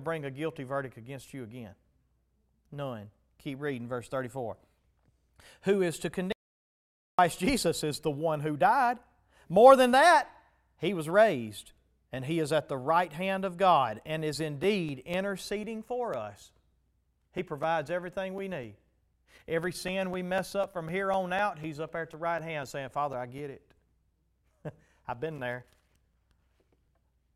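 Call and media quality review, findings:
Audio dropout to silence, 6.32–7.19 s: speech cuts to silence for 0.86 s, no room tone. Likely input link loss or mute while recording continued.

Periodic USB or driver dropouts, 14.63–27.13 s: regular ticks every 0.25 s, about fifty, each a few ms of silence; background task stalling the USB bus or driver.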